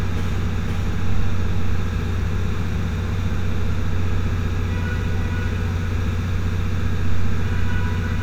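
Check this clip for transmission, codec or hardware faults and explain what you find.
One fault runs through the whole clip: a doubled audio track. Every sound is followed about half a second later by a full-band copy at roughly the same loudness, with no decay or room colour, so each event lands twice like a hard slapback. The likely cause is the audio being picked up a second time through a slower path, or an edit leaving two copies out of step. On a waveform, each transient has a twin about half a second later. A spectrogram shows the same pattern repeated along the time axis at that spacing.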